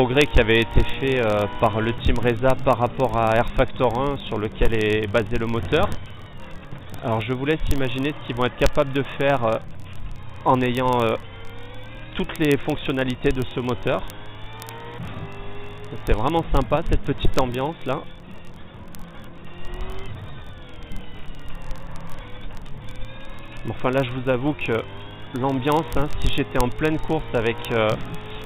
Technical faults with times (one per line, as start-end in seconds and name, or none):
0.10-28.44 word clock ticks